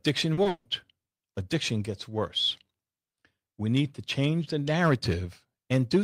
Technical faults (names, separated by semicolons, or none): short concealed packet loss; long network dropout